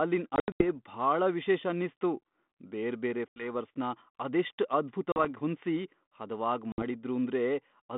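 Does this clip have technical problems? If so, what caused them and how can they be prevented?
Yes. Packet loss on an ADPCM call cuts hard-edged silent holes at 0.36–0.64 s (about 180 ms lost in short runs, longest 80 ms, before "ಭಾಳ ವಿಶೇಷ ಅನ್ನಿಸ್ತು"), 3.28–3.47 s (80 ms), 5.12–5.26 s (40 ms, before "ಹೊಂದ್ಸಿ ಹದವಾಗ್") and 6.72–6.83 s (60 ms, after "ಹೊಂದ್ಸಿ ಹದವಾಗ್"). After each hole the receiving decoder's adaptive prediction and step size no longer match the sender's, so the 32 kbit/s telephone-band speech returns slightly distorted until the two resynchronise tens of milliseconds later. A more reliable link with packet-loss concealment that keeps the decoder state aligned would prevent this.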